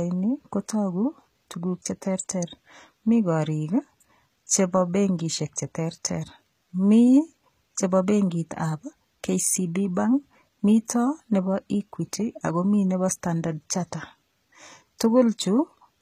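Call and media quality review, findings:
Gritty, metallic sibilants and lispy s sounds, throughout; treble extended but synthetic, nothing above 14.9 kHz. Likely HE-AAC compression: upper band rebuilt by spectral band replication, harmonics misaligned at crossover, damage fits a bitrate near 20 kbps.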